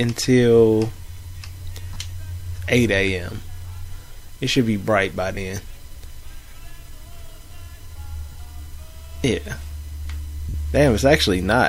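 Lost LE Audio frames at 1.94–1.96, 5.35–5.37, 8.32–8.35 and 10.49–10.54 s. The LC3 decoder filled the 20 to 50 ms gaps with recycled spectrum, leaving a brief noisy smear.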